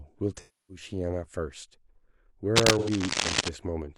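From 0.37 to 0.84 s, AAC frame loss with concealment leaves a smeared, phasey patch as the decoder repeats the last good spectrum, matching roughly seven lost frames. On a spectrogram it shows as blurred, flattened harmonics. From 2.55 to 3.49 s, cable scratch noise, likely from a worn connector being moved, adds dense rustling about as loud as the speech. On the waveform it appears as jagged, uneven bursts. Within that burst, a second dropout from 2.78 to 2.90 s smears the sound again.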